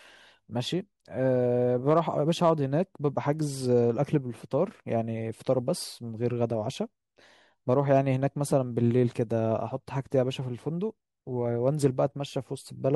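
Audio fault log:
1.89–1.99 s, 2.44–2.50 s, 7.71–7.98 s and 11.86 s: hard clipping. Peaks of the speech overshoot the stage's ceiling by about 2 dB (about 1 dB at 7.71 s) and are sliced flat, and those squared tops add high harmonics heard as brief crackle on loud moments.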